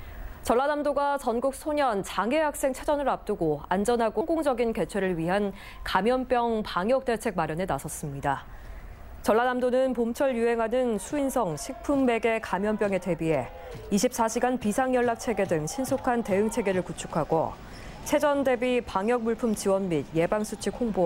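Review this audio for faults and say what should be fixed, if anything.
Compressed frames skipped at 4.21 s and 11.18 s. The sound jumps ahead about 0.2 s, then about 70 ms, as whole 32 ms codec frames go unplayed. To prevent it, check the file's integrity after transfer and re-encode damaged copies from the original source.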